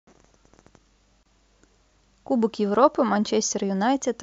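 At 1.23 s the speech drops out for about 26 ms, a gap at a join of encoded pieces. Two separately encoded segments were butted together without trimming, so the encoder's start-up delay and end-of-frame padding remain as a short hole before the speech resumes exactly where it stopped. It sounds like a brief stutter. A waveform shows a flat stretch ending at 1.26 s, and a spectrogram shows a thin vertical gap across all frequencies with slightly blurred edges. The join spacing fits pieces about 4 s long.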